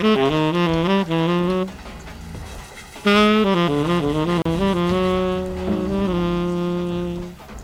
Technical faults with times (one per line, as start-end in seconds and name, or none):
4.42-4.45 gap at a join of encoded pieces